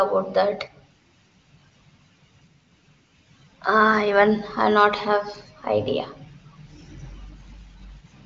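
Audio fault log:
No faults heard.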